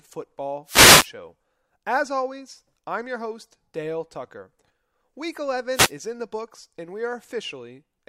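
Wireless microphone noise hits break into this speech clip at 0.65 to 1.10 s and again at 5.73 to 5.92 s, just before "is in the books". Each is a brief swish of static laid over the speech. The radio link from an analogue FM microphone is fading as reflected signals cancel the direct one at the receiver, so receiver noise surges up until the signal recovers.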